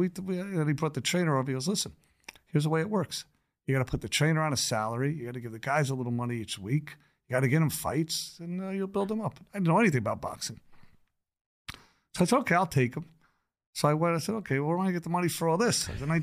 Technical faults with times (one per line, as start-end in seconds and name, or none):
none